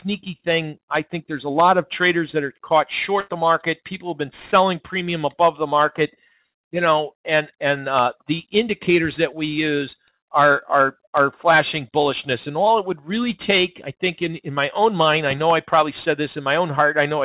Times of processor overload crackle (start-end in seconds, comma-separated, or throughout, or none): none